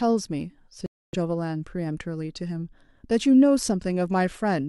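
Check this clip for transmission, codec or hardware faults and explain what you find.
One transmission fault is audible. From 0.86 to 1.15 s, a Bluetooth stall cuts the speech to roughly 270 ms of silence before it resumes, likely because the headphones' buffer ran dry while delayed packets were resent.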